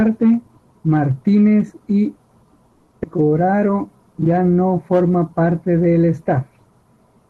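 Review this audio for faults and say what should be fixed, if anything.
At 2.71 s the speech stops and is replaced by about 200 ms of buzzy, fading continuation of the last sound. At 2.94 s it resumes exactly where it left off, with nothing lost. This is a call audio freeze. Packets were likely held up in transit, the jitter buffer ran dry, and the receiver extended the final sound until data arrived. The whole stream then plays about 200 ms later than before.

Between 3.03 and 3.07 s the speech jumps forward. Roughly a tenth of a second is gone, and the two sides are butted together with only a 10 ms bridge, so the sound lurches abruptly. This is a skip ahead. Audio was dropped while later packets were already waiting, either lost on the way or discarded as the jitter buffer shed backlog. About 100 ms of the delay added by the freeze is clawed back.

From 3.21 to 3.99 s, just before "ya no forman parte", the speech drags at about 85% speed. 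Pitch stays the same, but sounds are stretched. This is a jitter buffer slow-down. Running low or having just raised its target delay, the buffer repeated single pitch periods and bits of pauses to rebuild its reserve, adding 121 ms. The Opus call path underneath, limited to about 12 kHz, shows ordinary codec coloring.

Prevention: stabilise network delay and tune the jitter buffer to a steadier target, so it neither runs dry nor drops audio to catch up.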